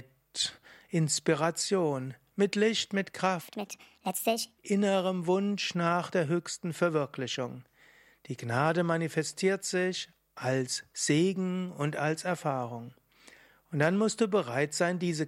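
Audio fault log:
3.41–4.58 s, section at the wrong speed: for just over a second the speech runs about 1.52 times too fast, so it sounds hurried and pitched up by roughly seven semitones, close to a musical fifth. Because speed and pitch rise together and then drop straight back at 4.58 s, the passage was likely played or resampled against the wrong clock rather than deliberately pitch-shifted, which would leave the timing unchanged.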